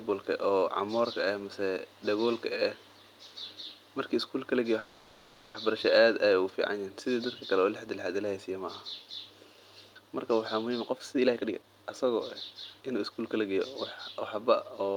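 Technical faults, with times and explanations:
4.79–5.56 s, call audio freeze: the sound stalls and the last moment is drawn out into a buzzy, fading hiss for about 750 ms. It never drops to full silence, then picks up exactly where it stopped. The likely cause is packets held up in transit, emptying the jitter buffer so the receiver had to improvise a continuation. Nothing is lost, but everything afterwards arrives about 750 ms later than before.
10.80–13.59 s, jitter buffer speed-up: the speech sounds rushed, running at about 124% of normal pace while the pitch stays unchanged. Delayed audio piled up in the buffer beyond its target depth. To catch up, the receiver repeatedly cut out tiny slices, each one or a few pitch periods long, trimming roughly 0.7 s in total. That is why it hurries without sounding higher.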